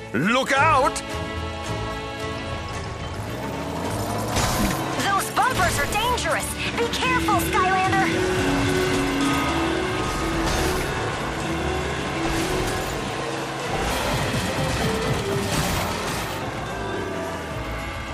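From 13.91 to 16.42 s there's a section at the wrong speed: it runs 1.2 times fast, pitching up about three semitones, likely a clock mismatch during editing or playback.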